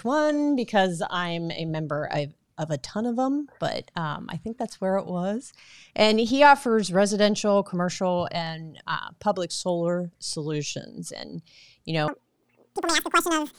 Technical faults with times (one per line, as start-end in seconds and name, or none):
12.08-13.59 audio read two samples at a time (double speed)